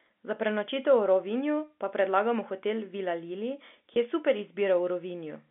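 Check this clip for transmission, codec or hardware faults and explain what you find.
One transmission fault turns up: a brief packet loss with pitch repetition between 3.94 and 3.96 s, just before "je super". For about 20 ms the speech turns into a slightly held, buzzy tone before the next words come in cleanly. A single lost packet most likely caused it. The receiver filled the 20 ms hole by repeating the last pitch period it had received. That stretch is too short to fade toward silence, so the repeated cycle registers only as a brief frozen buzz. The call runs over G.711 A-law telephone coding, so the sound stays within roughly the 250 to 3500 Hz band of a fixed line.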